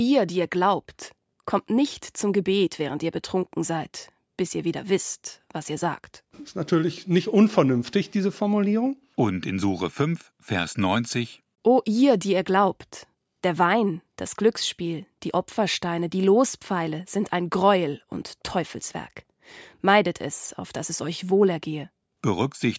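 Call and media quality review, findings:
No faults found in this speech.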